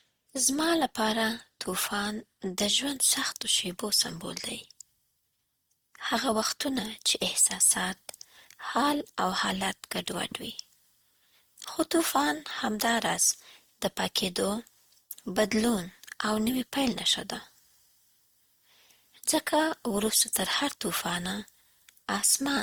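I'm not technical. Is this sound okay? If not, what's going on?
No. Throughout, the speech sounds swirly, smeared and hollow with blurred consonants, likely generation loss: compressed and re-compressed about five times, each pass adding damage.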